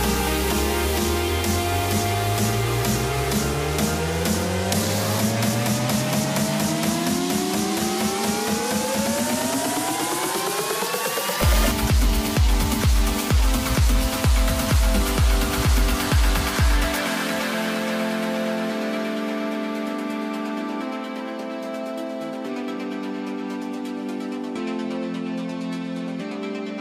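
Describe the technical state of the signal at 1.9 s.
At 1.9 s the signal is intact, with no dropout, clipping, distortion or other fault audible at that moment.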